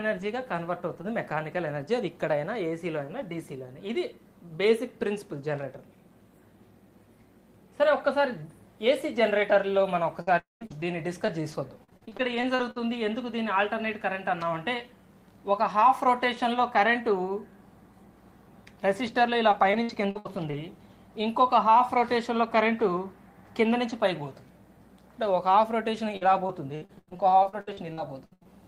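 The audio turns choppy from 10.21 to 12.78 s, 19.08 to 20.87 s and 26.17 to 28.47 s. These are repeated packet loss (robotic sound), where short holes of up to 84 ms are patched by extending the previous sound. Inside the first stretch, from 10.39 to 10.63 s, the sound smears into a fading buzz or hiss and then goes silent for about 0.15 s before resuming with roughly 0.22 s missing, likely a long network dropout.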